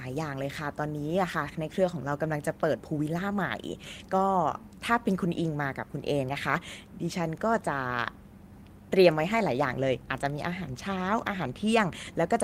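No technical faults can be heard in the recording.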